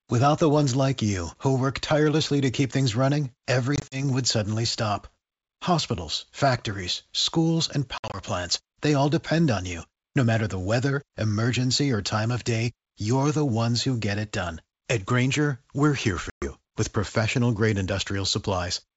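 Packet loss on an ADPCM call breaks the speech three times: at 3.76 to 4.04 s between "to keep things running" and "would suddenly stop" (80 ms lost in runs up to 40 ms), at 7.98 to 8.19 s after "factories schools and" (100 ms, runs up to 60 ms), and at 16.30 to 16.50 s before "with professional grade" (120 ms). Each is a hard-edged silent gap. Unlike plain dropouts, the sound comes back slightly distorted, because the decoder's predictor and step size have drifted from the sender's. It recovers within tens of milliseconds.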